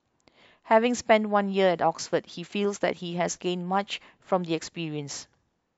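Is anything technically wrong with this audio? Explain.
No, there are no technical faults.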